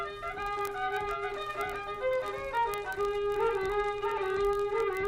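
From 0.11 to 5.07 s, word clock ticks recur steadily about every 20 ms as an unlocked receiving clock slips one sample, unlike randomly spaced clicks.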